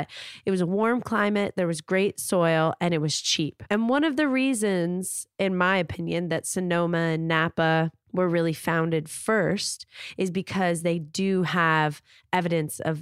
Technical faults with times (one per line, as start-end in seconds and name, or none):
none